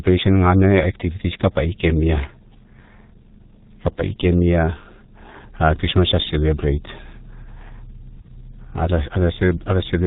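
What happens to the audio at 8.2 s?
VoIP packet loss concealed by the speech codec occurs from 8.21 to 8.27 s. A 30 ms gap, which fits a single lost frame, is filled by the decoder extending its last pitch and filter at falling gain, so the sound turns into a brief buzzy tone or coloured noise that fades. Because each frame builds on the previous one, it stays weak or distorted just after the gap.

Underneath, the G.723.1 codec at 6.3 kbit/s applies heavy damage here too. With nothing above 4 kHz and a slowly updated voice model, the speech is muffled and hoarse, with smeared consonants.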